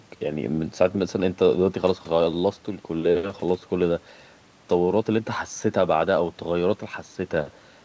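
Nothing in this speech stood out as a technical fault on listening, and the call path behaves as expected for the G.722 codec, with no content above 8 kHz.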